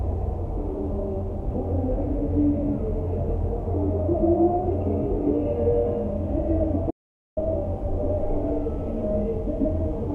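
At 6.91 s there's an audio dropout to silence: the sound cuts off mid-flow and returns at 7.37 s, losing about 461 ms. The gap is dead silent, with no background left. The likely cause is lost input, a disconnected device, failed link or stray mute, while recording continued.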